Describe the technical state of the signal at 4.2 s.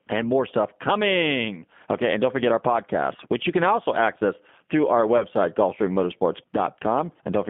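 At 4.2 s the speech is carrying G.729 codec damage, present throughout the clip. The sound is rebuilt from a vocal tract filter, pitch predictor and sparse pulses, which fits an 8 kbit/s G.729A stream. It is band-limited to 200 Hz–3.5 kHz and plainly rough and synthetic.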